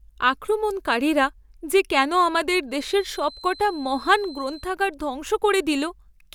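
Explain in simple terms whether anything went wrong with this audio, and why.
A feedback whistle runs from 2.66 to 4.72 s, starting just after "আক্রমণকারীরা যে কেন আমাদের". A thin, steady 4.1 kHz tone sits quietly behind the speech, swelling and fading slowly, likely from loudspeaker sound leaking back into the microphone and hovering right at the edge of feedback.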